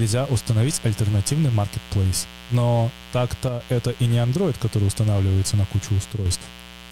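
A raspy mains buzz runs under the speech throughout, roughly 20 dB down: spiky 60 Hz interference with harmonics into the kilohertz range, harsher than a smooth hum. At 3.48 to 3.60 s and 6.13 to 6.26 s the level drops abruptly by 6 dB, likely one channel dropping out before the mono sum, a clean step rather than a fade.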